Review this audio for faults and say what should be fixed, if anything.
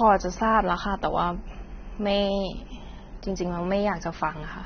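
AAC compression, throughout the clip: the speech has nothing above 6.3 kHz and the codec damage is plainly audible, leaving the sound dull and smeared. The cause is likely AAC-LC encoding at a low bitrate, around 24 kbps. At that rate the encoder pulls its cut-off down and quantises the remaining frequency lines so coarsely that detail blurs and bands thin out or fill with substitute noise. To prevent it, work from an uncompressed source or encode at a much higher bitrate.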